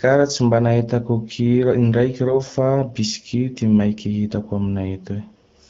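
At 2.27 to 2.36 s, between "mba nahitako kira indraiky" and "fa bisky ty maiky", the speech turns hoarse and gargly. These are AMR bit errors. The span covers about four 20 ms frames. Some of their less protected bits were flipped, about 7 percent of them. The pulses driving the vocal tract model land in the wrong places. Pitch, gain and spectral detail drift. Pitch and level hold roughly, but the sound scratches. Around this, the AMR wideband codec at 12.65 kbit/s keeps speech clear.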